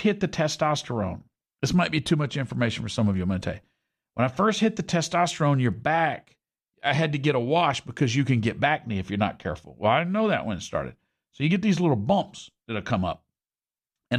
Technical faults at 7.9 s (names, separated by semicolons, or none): none